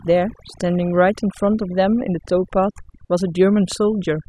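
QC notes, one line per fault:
Throughout: overdone noise removal. The denoiser is working far too hard, pulling individual frequency bands down or shutting them off whenever they come close to its noise estimate. Quiet parts of the speech get cut along with the noise, so the background drops and breaks up into twinkling specks.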